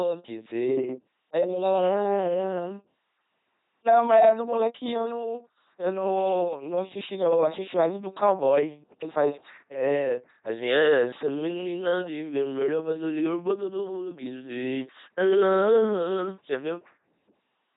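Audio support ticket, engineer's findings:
LPC-10 vocoder artefacts, heavy, across the whole speech clip. Buzzy, mechanical robot voice. Each frame is rendered as either pulse-driven buzz or noise, with nothing in between. Misjudged voicing gives stray buzz or hiss. Vocal tract reduced to a low-order filter. Nothing above 3.8 kHz. The character points to the 2.4 kbit/s LPC-10 codec. Probable component: the narrowband codec stage.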